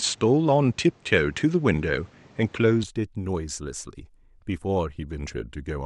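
Speech clip whose first 2.84 s sound duller and slightly noisier, likely from the input switched to a poorer device; the spectrogram shows nothing above 8.6 kHz until then, with a raised noise floor and a level step of several dB.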